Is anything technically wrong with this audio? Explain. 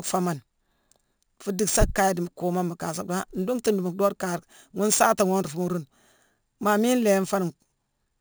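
Yes. Throughout the speech there is imaging from sample-and-hold upsampling: the sound seems to have been raised from a 16 kHz rate by repeating samples without filtering. Mirrored spectra fill roughly 8 to 16 kHz at about -15 dB, heard as a metallic fizz that tracks the speech and moves against its pitch.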